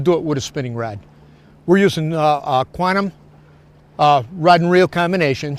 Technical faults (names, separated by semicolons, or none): none